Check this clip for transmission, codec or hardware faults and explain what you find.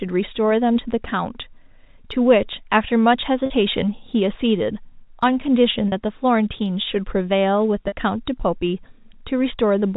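Three short dropouts show packet loss with pitch repetition, at 3.46 s, 5.88 s and 7.88 s, each lasting 40 ms, which fits two lost 20 ms packets. The receiver filled each gap by repeating the last pitch period of the speech, so each one sounds like a brief buzzy hold on the sound rather than a silence. On a waveform the gap is a run of repeated cycles that fade in level. A spectrogram shows frozen, evenly spaced harmonic stripes for that 40 ms. The sound sits in the narrow band of G.711 telephone coding, with nothing above 4 kHz.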